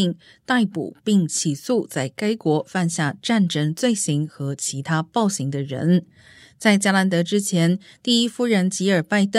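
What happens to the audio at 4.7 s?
Nothing goes wrong at 4.7 s; the speech continues intact through that moment.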